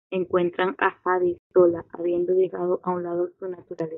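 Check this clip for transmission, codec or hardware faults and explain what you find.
One fault stands out: clock slip clicks. Between 1.14 s and 3.52 s there are three or so faint, evenly spaced ticks, about one a second, small single-sample discontinuities. The likely cause is two devices running on separate, unsynchronised clocks that differ by around 20 parts per million. Each time that drift adds up to a whole sample, one sample is dropped or repeated, so the slips fall at a steady, regular rate.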